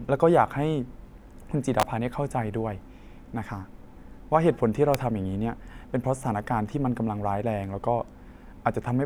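At 1.80 to 1.83 s, a sharp snap cuts across the speech. It is a brief cluster of clicks peaking around -5 dBFS. At 4.94 s, a second, shorter snap hits at a similar level. Both sound like an electrical switching spike. A nearby switch, motor or static discharge likely arced, and the audio line picked up the burst. The clicks sit on top of the speech rather than replacing it.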